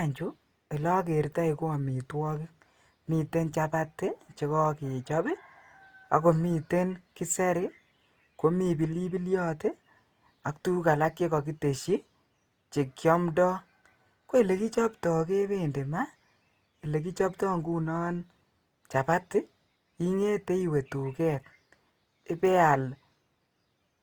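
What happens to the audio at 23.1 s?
Opus compression is present at 23.1 s, as it is across the whole recording. At this point the speech sounds rough and grainy, with a noisy texture where clean harmonic detail would be. That points to the encoder likely running in its music (CELT) mode at a low rate, around 24 kbps. There, band energies are kept but their fine structure is filled in with folded or noise-like content. Bandwidth stays full, reaching about 20.2 kHz.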